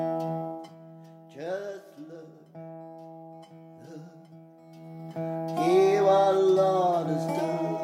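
Zipper noise runs from 0.37 to 0.78 s, where the level drops by about 10 dB in about 1 dB steps rather than a continuous ramp. Each jump is applied unsmoothed, so every discontinuity puts a small click into the waveform, and at roughly 30 steps per second these fuse into a ticking, zipping texture riding on the sound for as long as the gain is moving.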